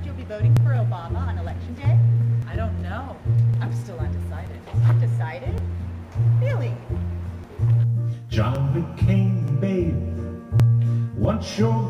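From about 6.02 to 9.39 s there's sample clock jitter: the converter's timing wanders by a few microseconds, so each sample lands slightly off. That adds a faint hiss, roughly 45 dB below the signal, thickening on loud, bright passages and dropping away when things go quiet.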